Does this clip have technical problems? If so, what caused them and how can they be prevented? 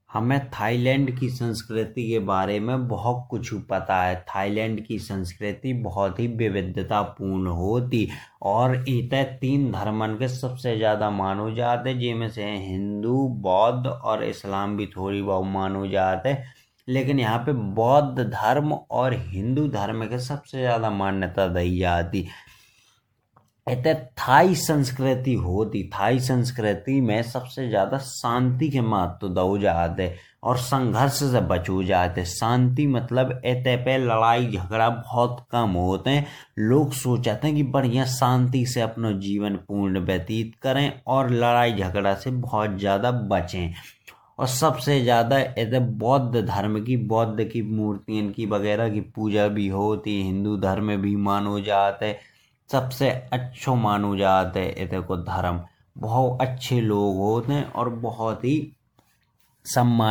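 Yes: generation loss throughout the speech, swirly, hollow and smeared with blurred attacks, likely from roughly ten successive MP3 encodes near 100 kbit/s. Keep a lossless master and encode only once.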